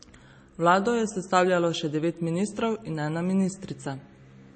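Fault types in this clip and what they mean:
MP3 compression: The speech has nothing above 8.4 kHz, and there's a plainly audible watery, swirly quality running through the whole clip, with s sounds turning metallic and chirpy. That's most likely a heavily squeezed MP3 encode. The low-bitrate damage, which fits something around 32 kbps, shows up as a hard treble cutoff plus weak frequency detail flickering on and off between frames, so consonants and onsets come out smeared rather than crisp.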